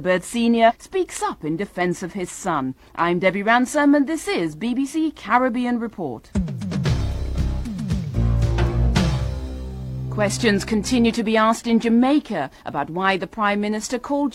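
At 0.65 s the decoder skips compressed frames, about two of them, either because they were missing from the stream or because they were rejected as damaged. Roughly a tenth of a second of audio never plays, and the sound lurches forward at about 0.72 s, a jump consistent with frames of about 46 ms.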